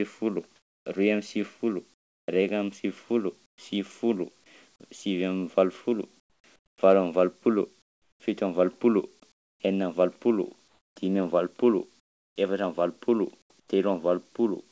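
Between 0.56 and 3.58 s, and again from 6.2 to 13.68 s, pauses in the speech lose their real background to a flat, featureless hiss, about 0.76 s and 1.9 s in total. This is likely comfort noise in place of the background, synthesized by the receiver while the sender's voice detector stopped transmission.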